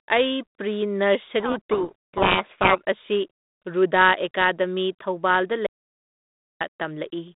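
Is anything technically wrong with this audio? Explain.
Yes. From 1.4 to 2.81 s there's a codec payload misread. The two ends disagree on the bit order inside each G.726 code word, so the decoder reads scrambled values, and the speech gets buried under harsh distortion until the ends agree again. Around that, the narrow 200 Hz to 3.7 kHz band of 32 kbit/s G.726 telephone audio comes through.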